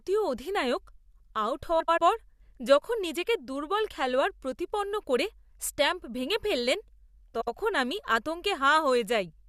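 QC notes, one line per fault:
1.80–1.98 s and 7.34–7.48 s, frames out of order: two neighbouring blocks (about 85 ms each, then about 64 ms each) play in swapped order. The result is a garbled flutter, and no time is lost. On a spectrogram, formant tracks break at sharp vertical seams and jump discontinuously. On the waveform, the envelope shows steps at each join.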